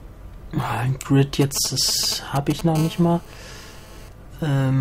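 From 1.42 to 2.61 s, a nearby 2G handset exchanging short signalling bursts couples radio energy into the audio circuit, which rectifies it. These are GSM signalling bursts: a galloping dit-dit-dit of brief raspy buzzes at 217 Hz, roughly 10 dB below the wanted audio.

From 2.75 to 4.09 s, the same kind of interference returns as GSM phone buzz. A phone on a call transmits continuously at 217 bursts per second, and the rectified pulses give a steady, hard, harmonic-rich 217 Hz rasp at about 19 dB below the signal, unrelated to the audio itself.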